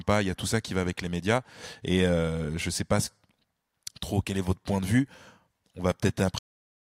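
At 6.39 s the speech stops abruptly, a cut-off end. The final stretch of audio was never written out or played, so the sound is severed mid-utterance rather than finishing naturally, and the remaining 0.59 s is pure digital silence with no decay or room tail. On a waveform the signal ends mid-waveform in a vertical edge followed by a flat line. A spectrogram shows energy ending in a sharp vertical wall across all frequencies.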